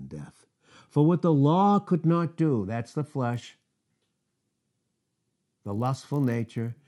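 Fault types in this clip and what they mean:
Resampler restarted on every block: a 50 Hz buzz present only with speech, as each 20 ms block was resampled alone, erring at each edge.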